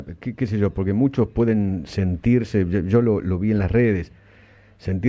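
No technical faults can be heard anywhere in the audio.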